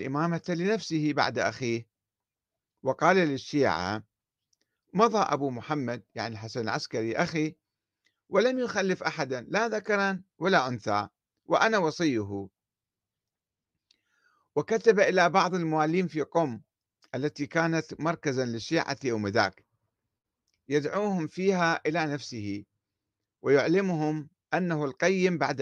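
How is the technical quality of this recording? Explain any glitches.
Nothing in this speech recording stands out as a glitch, so there's really nothing to explain here.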